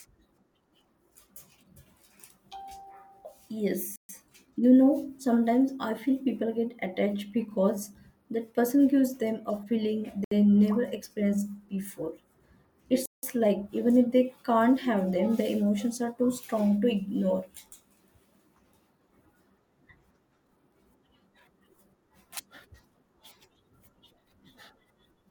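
The speech cuts to silence three times: 3.96–4.09 s, 10.24–10.32 s just before "never experienced before", and 13.06–13.23 s. These are Bluetooth stalls, likely from interference delaying packets until the headphones' buffer emptied and playback paused for resends.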